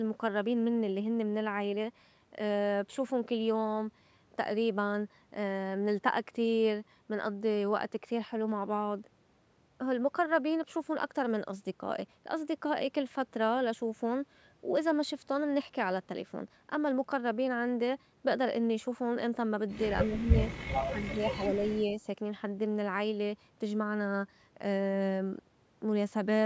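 Speech that dips twice, briefly near 20.06 s and more deeply from 20.84 to 21.66 s, where it drops by roughly 20 dB. This is likely speech suppressed in double talk: an echo canceller, unable to separate this talker from loudspeaker echo, turned both down.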